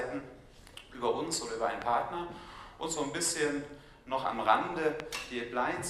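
At 1.82 to 1.84 s there's a loud pop, a single sharp hit that jumps well above the program, something like 15 dB hotter, while the sound keeps going underneath. A second, matching one lands at 5.00 to 5.02 s. Each is a brief voltage spike that got added to the signal, likely from a plug, switch, static discharge or a driver glitch, with the downstream circuitry shaping it into that short thump.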